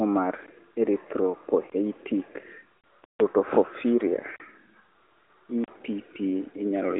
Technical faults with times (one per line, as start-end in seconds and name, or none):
2.78-2.84 lost AMR speech frames
3.04-3.20 block of digital silence
4.36-4.40 block of digital silence
5.64-5.68 block of digital silence